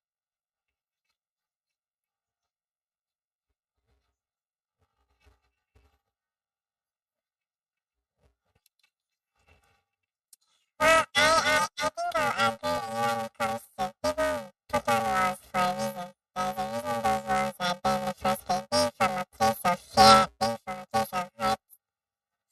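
Speech, with planar audio read as interleaved throughout. Blocks last about 2.9 ms, which fits 128-sample blocks. That produces a robotic 345 Hz buzz and no clear octave shift.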